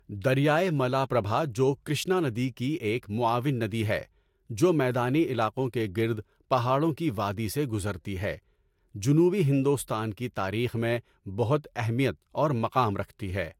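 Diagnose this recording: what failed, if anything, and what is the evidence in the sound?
Codec stage, throughout the speech: a spectrogram shows a hard ceiling at 16.6 kHz for the whole length, with nothing above it. This points to low-bitrate audio saved at a high bitrate, likely a lossy encode near 70 kbit/s re-saved as high-rate MP3, which cannot restore the discarded band.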